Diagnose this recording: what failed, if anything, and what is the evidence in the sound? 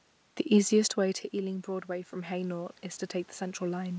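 Automatic gain rising, in the call processing stage. Near half a second the talker moves away and the input drops by about 13 dB. From 0.97 s to the end, speech and room noise swell together as the gain controller slowly climbs to compensate.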